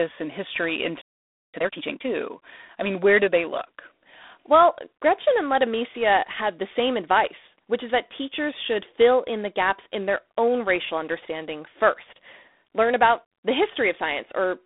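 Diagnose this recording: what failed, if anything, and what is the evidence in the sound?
The codec stage is the culprit. Throughout, the speech is squeezed into a telephone band of roughly 250 Hz to 3.6 kHz, with nothing above 3.8 kHz, and a rasping hiss rides the level of the speech. That's G.726 ADPCM at a bitrate that sounds like 24 kbit/s, coding too few bits of prediction error per sample.

There's a playback buffer hiccup right after "and history". From 1.54 to 2.06 s the speech rushes along at about double speed with the pitch unchanged. That's time-compressed catch-up, with the player trimming and cross-fading small slices to work off a backlog after a stall.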